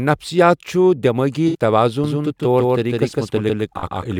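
Right after "چھُ دؠمٲغی", at 1.48 to 1.56 s, there's AAC frame loss with concealment. About 64 ms went missing, which fits three lost frames. The decoder patched the gap from the last good spectrum, so it comes out as a brief smeared, noisy blur.

From 2.04 s to the end, a doubled audio track kicks in abruptly: a second full-band copy running about 150 ms late at roughly the same level, with no room tail, likely a slower second capture path picking up the same signal.

At 3.79 to 3.84 s there's another AAC concealment patch, about 43 ms this time, which fits two lost frames, heard as a shorter phasey smear.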